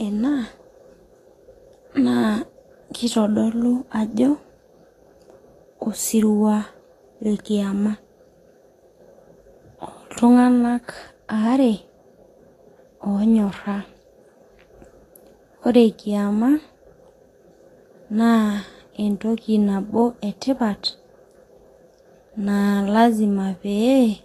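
Throughout the speech there's a hissy, grainy treble with nothing above about 14.1 kHz, likely Vorbis compression at a low bitrate, around 34 kbps.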